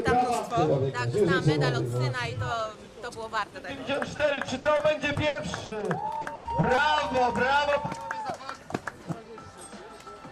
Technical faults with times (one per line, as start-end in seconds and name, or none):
4.17-5.83 repeated packet loss (robotic sound)
6.21-6.79 repeated packet loss (robotic sound)